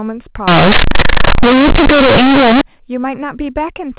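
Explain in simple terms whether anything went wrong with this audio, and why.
Companded audio read as linear, from 0.48 to 2.61 s. The telephone-style coding of this speech stores each sample on a squeezed, logarithmic scale (mu-law). In this stretch, those stored bytes were played back as ordinary 8-bit samples without being expanded. Small sign changes then jump across about half the output range, so soft sounds come out as loud as strong ones, giving a harsh, buzzy roar with heavy noise even in the pauses.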